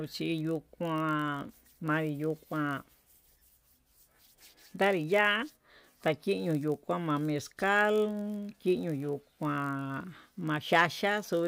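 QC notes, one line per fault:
Throughout: block size mismatch (padded), a 46.9 Hz buzz from brief zero-filled gaps, which fits 1024-sample reads; speech runs 0.999× speed at normal pitch; evenly spaced vertical stripes on spectrogram, flat dropouts in waveform.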